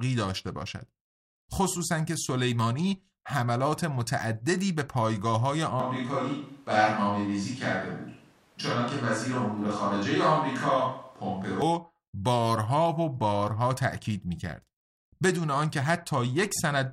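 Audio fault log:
5.80–11.62 s, switch to a distant microphone: speech abruptly turns roomy and thin, likely a farther mic; spectrogram shows weaker lows, smeared decay tails, noise floor about 35 dB down.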